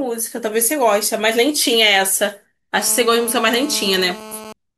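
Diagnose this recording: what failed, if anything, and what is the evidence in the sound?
A GSM phone buzz enters in the analogue wiring from 2.78 s to 4.53 s, sitting about 16 dB below the speech. A nearby 2G handset on a call was sending radio bursts at 217 Hz, and the audio circuit rectified them into a raspy, harmonic-rich buzz at that rate, nearly steady and unrelated to the speech. Its 217 Hz fundamental and hard pulse texture set it apart from the smoother tone of mains hum at 50 or 60 Hz.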